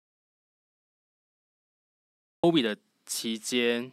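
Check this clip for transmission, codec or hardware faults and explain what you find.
There's one fault here, an audio dropout to silence. From the very start to 2.44 s the track is silent with no room tone at all, and then the speech cuts in mid-flow. Most likely the input dropped out while the recorder kept writing.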